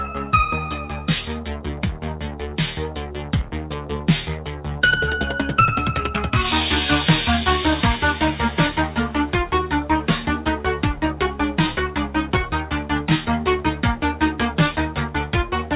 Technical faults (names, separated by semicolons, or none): noise suppressor applied to music or sounds; sound cut by the noise suppressor